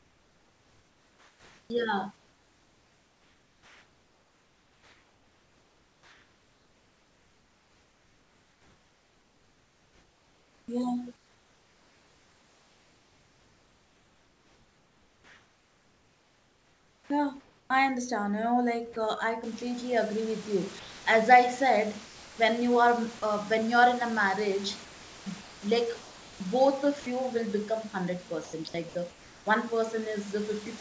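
A speech recording in which the sender's voice detector most likely kept gating the transmission, producing sound chopped by the voice detector from 0.0 to 17.7 s, 24.84 to 26.40 s and 28.44 to 29.46 s. Over the first stretch roughly 16.5 s of the sound is swapped for comfort noise, so syllables and word edges break up. Sound dropped by the voice detector also occurs where quieter passages were likely taken for background and not sent: 30 ms at 18.93 s, 20.79 to 21.06 s, 22.05 to 22.38 s, 30 ms at 23.19 s and 60 ms at 27.00 s. In each gap the speech gives way to steady comfort noise, then returns when the detector triggers again.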